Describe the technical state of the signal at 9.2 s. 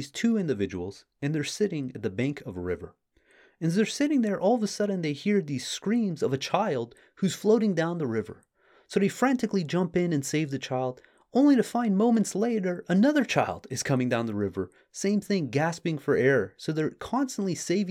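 At 9.2 s the speech signal is intact, with no audible dropout, distortion, glitch or other fault at that moment.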